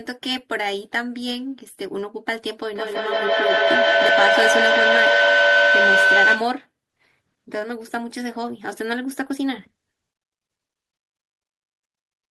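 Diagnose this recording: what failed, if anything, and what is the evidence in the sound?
A feedback howl in the call path runs from 2.73 to 6.58 s. Speech picked up from a loudspeaker recirculated with rising gain, narrowing to a tone near 1.5 kHz that peaks about 7 dB above the speech. A spectrogram shows a bright horizontal line pulsing roughly every 150 ms.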